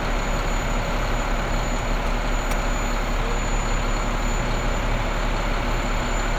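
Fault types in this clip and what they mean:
Nothing stood out on listening to this audio.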